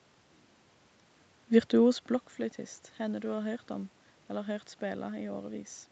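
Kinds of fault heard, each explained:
Nothing stood out as a fault on listening to this speech.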